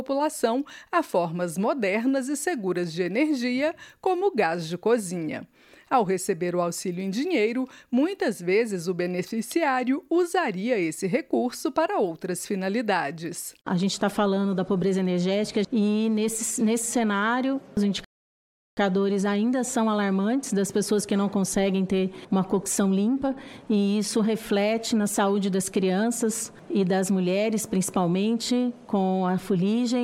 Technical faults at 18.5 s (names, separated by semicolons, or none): playback stall